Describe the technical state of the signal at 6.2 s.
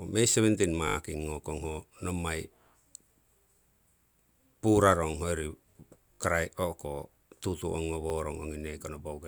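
A repeated buffer runs from 6.14 to 6.2 s: a 20 ms chunk plays three extra times with hard joins, giving a brief buzzy stutter in the speech.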